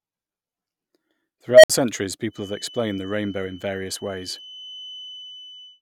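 At 1.50 s an unstable filter takes hold: a tone near 700 Hz swells over about 0.13 s until it clips, then cuts to silence for 60 ms as the runaway recursion overflows. Unlike feedback, it explodes and dies rather than lingering.

From 2.27 s to the end, a thin, steady 3 kHz feedback whistle sits about 15 dB below the speech, swelling and fading slowly in level. The likely cause is a loudspeaker-to-microphone loop poised at the feedback point. Unlike the filter fault, it never builds into a howl or cuts out.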